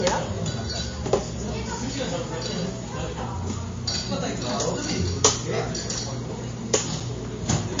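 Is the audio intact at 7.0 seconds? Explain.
No. At 7.0 s there is an underrun with held sample: the output buffer ran dry for about 5 ms and the converter froze on its last value until data came back. The waveform sits flat at that held value for that instant, so the sound briefly stops. Because playback resumes where it left off, with essentially nothing skipped, the edges are soft and there is no sharp click.

This moment also carries the MP3 compression damage that runs through the whole clip. It is plainly audible: nothing is present above 7.2 kHz, which points to a very low bitrate, around 32 kbps, as the likely cause. Starved of bits, the encoder drops the treble and switches weak frequency lines on and off between frames. The result is a dull, watery, swirling texture, with smeared attacks and metallic chirping on bright transients.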